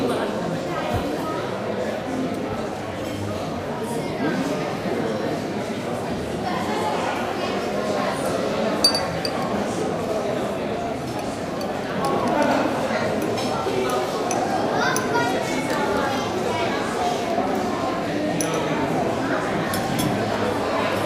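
A recording of everyday sounds, with no technical faults heard.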